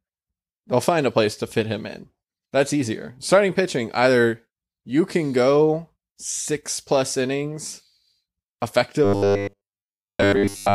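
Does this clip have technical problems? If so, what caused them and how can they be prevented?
Yes. From 9.04 s to the clip's end at 10.74 s, the speech turns into robotic sound from repeated short buffers: a rigid, metallic buzz at 100 Hz that still loosely follows the words. The likely cause is audio arriving too seldom, so each gap is filled by repeating the last short stretch, which fits a 10 ms buffer, while most of the real audio is skipped. Unlike plain dropouts, nothing falls silent. The fixed-pitch buzz is what gives it away. To prevent it, give the capture and playback path larger buffers and enough processing headroom that audio never arrives late.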